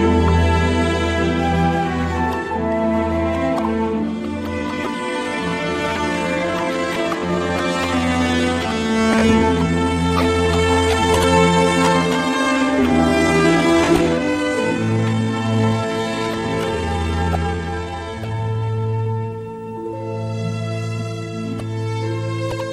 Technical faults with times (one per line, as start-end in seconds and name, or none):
4.55-19.35 time-stretched section